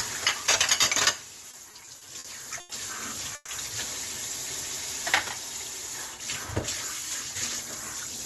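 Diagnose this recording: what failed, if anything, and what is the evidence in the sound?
Repeated stalls (stutter) at the network and jitter buffer: late packets emptied the buffer six times between 1.51 and 2.72 s, so the last sound was stretched over about 220 ms in all, with gaps up to 90 ms.

Call audio freeze, likely from a packet delay at the network stage that drained the jitter buffer: from 3.35 to 3.51 s the sound hangs and fades for 130 ms, ending with a brief silence, then resumes.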